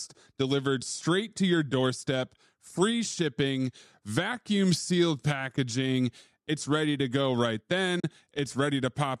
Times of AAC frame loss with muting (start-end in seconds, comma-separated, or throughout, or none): 5.57, 8.00-8.04